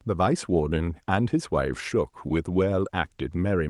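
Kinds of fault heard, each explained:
No faults of any kind can be heard in this speech recording. It carries the sound of a working call path, with the upper range stopping at about 12 kHz as an Opus-coded WebRTC call would.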